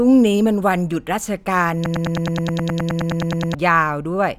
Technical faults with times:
1.86-3.55 broken-record loop

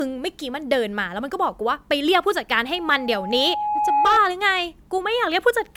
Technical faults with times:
0.00-5.77 generation loss
2.75-4.20 loudspeaker feedback squeal

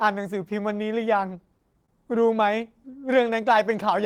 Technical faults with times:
1.45-2.30 scattered short gaps

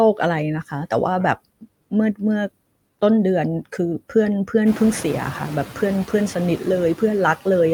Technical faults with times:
0.00-7.73 noise suppressor artifacts

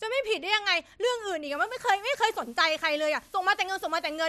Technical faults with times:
1.52-4.28 low bit depth with dither

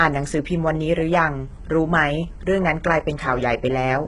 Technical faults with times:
0.00-4.07 HE-AAC compression

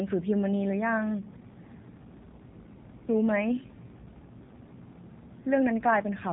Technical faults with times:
0.00-6.32 G.729 codec

